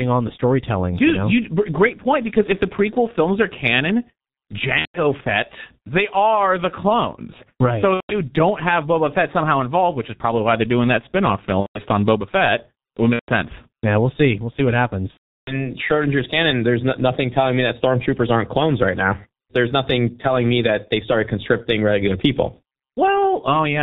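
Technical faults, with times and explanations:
Throughout: G.723.1 codec. The speech runs through a low-rate internet-telephony coder at 6.3 kbit/s, working in 30 ms blocks and updating its model of the voice only slowly. Heavy coding damage results: nothing survives above 4 kHz, so the voice is muffled and dull, a hoarse, rough texture sits over it, and consonants smear together because the coarse model cannot follow quick changes.
4.79–5.01 s, 7.94–8.21 s, 11.60–11.81 s, 13.13–13.29 s and 15.11–15.72 s: VoIP packet loss concealed by the speech codec. Stretches of audio went missing, about 150 ms each in the first four gaps, which fits five 30 ms frames, and about 360 ms in the last. The decoder filled them by repeating its last pitch and filter with falling gain, so the voice stretches into a fading buzzy tone or tinted noise, then stays weak and distorted briefly after the audio resumes.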